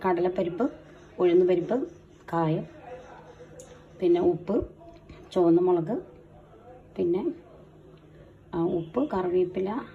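No technical faults can be heard anywhere in it.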